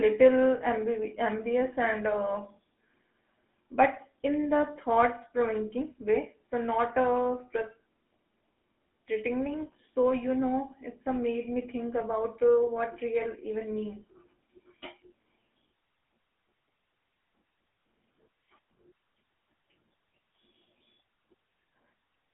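From start to finish the speech carries the sound of the GSM full-rate codec. The codec rebuilds the voice from a vocal-tract filter excited by a sparse, regularly spaced pulse train, which gives the buzzy, gravelly roughness that is plainly audible throughout and fits a 13 kbps full-rate stream. The band is confined to roughly 200 Hz to 3.5 kHz, with nothing above 3.8 kHz, so sibilants sound dull and the low end is thin.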